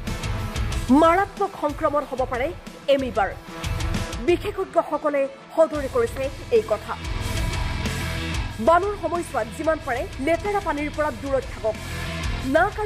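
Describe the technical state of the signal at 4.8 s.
At 4.8 s the signal is intact, with no dropout, distortion, glitch or other audible fault at that point.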